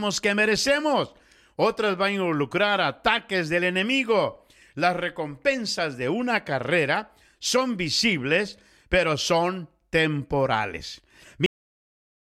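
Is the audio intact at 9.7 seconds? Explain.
Yes, the speech at 9.7 seconds plays through cleanly, with no dropout, click, distortion or other fault at that point.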